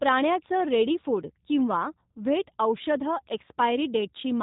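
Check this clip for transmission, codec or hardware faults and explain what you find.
One codec fault runs through the whole speech clip. G.729 coding is present throughout, and the damage is plainly audible. The speech is rebuilt from a vocal-tract filter, a pitch predictor and a few pulses per frame, at a rate that fits 8 kbit/s. Nothing passes above 3.8 kHz, and the speech sounds rough and synthetic. That buzzy, rebuilt quality is what separates it from simple narrowband filtering, which only dulls the sound.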